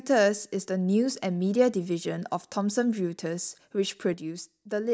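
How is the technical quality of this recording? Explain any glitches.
There is one glitch, near the end of this speech recording. From 4.14 s to the end at 4.93 s, the level drops abruptly by about 6 dB and stays down. The likely cause is one channel dropping out: if one side of a stereo feed goes silent and the pair is then summed to mono, material common to both sides loses half its contribution. Anything present only on the lost side vanishes, leaving the closing speech noticeably quieter.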